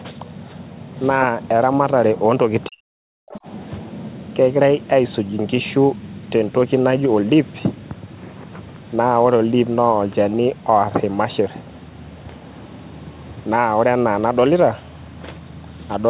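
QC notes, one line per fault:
2.68–3.46 s, speech suppressed in double talk: The talker's level collapses in pieces across this stretch. The deepest dip is about 40 dB, and around 0.7 s in total is affected. This is likely an echo canceller meeting both sides talking at once. It cannot tell the local talker from loudspeaker echo, so it turns everything down. The call's band stops at 4 kHz.
3.32–3.39 s, other side's voice leaking through: A brief scrap of a second voice surfaces during the suppressed stretch. It sits about 25 dB below the talker and lasts only around 70 ms. The likely cause is residual echo. The far side plays from the device's loudspeaker, and the canceller misses part of it. That part reaches the microphone and goes out with the local signal.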